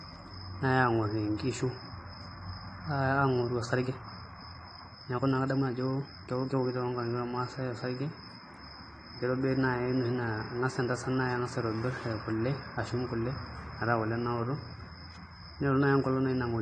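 The speech has most likely been through AAC compression from start to finish. An AAC-LC encoder working with too few bits throws away high-frequency detail and quantises what remains coarsely, so nothing is left above 9.5 kHz. The voice sounds dull and smeared, with a plainly audible warbling, fizzy grain on sibilants and held sounds. This fits a low bitrate of around 32 kbps.

From 3.79 to 6.69 s there is a time-stretched section, likely the work of software that squeezed this stretch to fit a shorter length. It ran the audio about 1.49 times faster and kept the pitch in place by dropping short slices. The pace jumps abruptly and then drops back, and the speech in between sounds rushed, while the pitch of the voice stays where it was.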